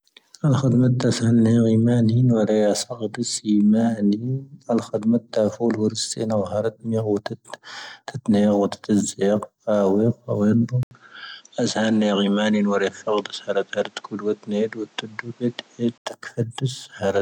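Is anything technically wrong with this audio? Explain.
Yes. From 10.83 to 16.06 s, after an 80 ms silence, the speech keeps the same loudness but loses everything above 8.5 kHz and gains a new, faint background noise. This is likely an input switched to a poorer device. The gap and the different noise floor set it apart from a simple bandwidth or filtering change.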